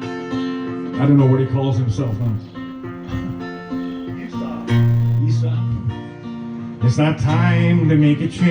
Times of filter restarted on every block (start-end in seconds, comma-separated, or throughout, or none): 2.07-5.20